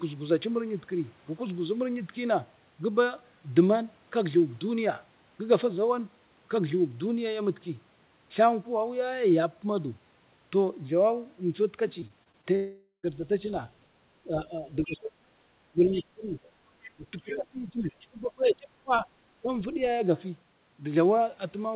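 From 12.0 to 12.45 s there is repeated packet loss, heard as a robotic, choppy flutter. Five short gaps, none longer than about 22 ms, are each patched by extending the previous sound, so about a fifth of that stretch is filled in. Unlike a single dropout, the sound keeps returning between the holes.

Right after, from 12.55 to 13.05 s, a long network dropout is the likely cause of a half-second loss. The concealment first stretches the last sound into a fading buzz, and the final tenth of a second or so is silent. The audio then resumes with that part missing, rather than stuttering.

Speech suppressed in double talk, likely from the echo canceller ducking during overlap, appears at 14.25–15.34 s (down about 30 dB at worst), 15.72–16.35 s (about 20 dB), 16.94–19.07 s (about 25 dB) and briefly at 19.42–19.5 s (about 10 dB). The talker's voice is turned down rather than patched over, which separates this from packet loss.

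The other side's voice leaking through, likely residual loudspeaker echo, surfaces as faint scraps at 15.92–16.04 s (about 20 dB below the talker), 16.83–16.9 s (about 25 dB below) and 18.01–18.06 s (about 30 dB below). These are an added second voice, not the talker's own level dropping. Across the whole clip nothing is heard above 4 kHz, which fits a G.711 telephone codec.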